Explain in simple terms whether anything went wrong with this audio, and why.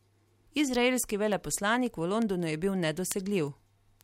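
Two digital devices were passing the speech between them on separate clocks that weren't locked together. Each time the clocks drifted a sample apart, one sample was lost or doubled. That causes word clock ticks, sharp clicks about every fifth of a second from 0.25 s to 4.01 s.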